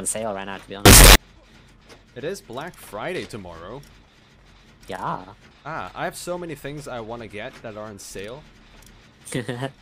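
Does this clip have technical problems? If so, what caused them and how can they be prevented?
Yes. From 0.86 to 1.16 s the audio turns into loud, harsh distortion, likely signed and unsigned samples mixed up in 16-bit data, making every zero crossing leap full scale. The waveform becomes a solid block and the spectrogram shows broadband smear. Prevent it by declaring the sample format explicitly wherever audio is read, written or converted.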